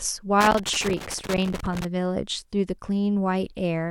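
From 0.41 to 1.85 s the speech is broken by loose connector crackle: a worn contact keeps making and breaking, chopping the signal into an irregular scratchy burst. Its random, uneven spacing separates it from the regular clicks of a buffer fault.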